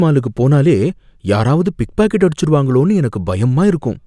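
No technical faults are audible.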